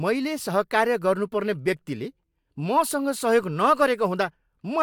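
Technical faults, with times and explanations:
Nothing stood out on listening to this speech recording.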